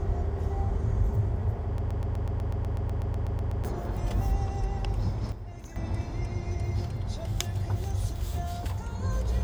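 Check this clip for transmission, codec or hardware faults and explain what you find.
Two faults are audible: a looping stall early on and an abrupt level change a little later.

A broken-record loop runs from 1.78 to 3.65 s. The likely cause is a stall in the player, encoder or stream, which kept resending the last fragment it held instead of new data. A piece about 124 ms long repeats 15 times back to back, giving a rapid, mechanical stutter at roughly eight repeats per second. Whatever sound belonged in those two seconds never arrives.

A sudden gain jump occurs between 5.32 and 5.76 s, where the level falls by about 9 dB with no fade. This is likely a digital gain change applied from one sample to the next without a ramp, so the sound and its background noise drop together in a single step. The change is heard as an abrupt dip in loudness rather than a natural decay.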